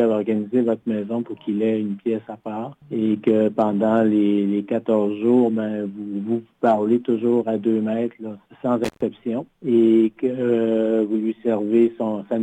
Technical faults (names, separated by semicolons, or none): intermittent contact